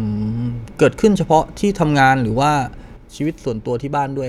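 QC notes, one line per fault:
2.96–4.29 s, one channel drops out: the speech abruptly falls about 6 dB and stays there to the end. That step most likely comes from one side of the stereo pair going silent, so the mono fold-down loses half of what both channels shared.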